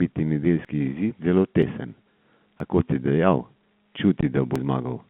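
A recorder or processor that likely works in one-second blocks drops a sliver of audio, around 20 ms, each time it closes one block and opens the next. This is audio missing between chunks: the two sides are butted together, so short jumps fall at 0.65 s (just before "izid zelo"), 1.63 s (just after "izid zelo"), 2.60 s and 4.56 s. The first three are spaced just under a second apart, and the fourth comes about two seconds after the third.

Between the third and fourth skips, a single lost packet was replaced with silence. This is packet loss filled with silence. From 4.21 to 4.23 s a 20 ms gap opens with hard edges. The sound passes through a narrow telephone band, roughly 150 Hz to 3.5 kHz.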